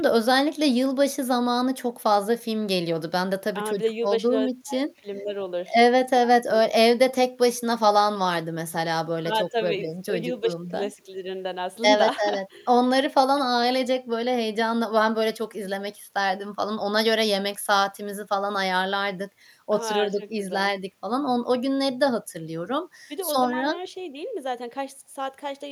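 No technical faults can be heard anywhere in this speech recording. There is nothing to place on a timeline and nothing to trace back to a cause.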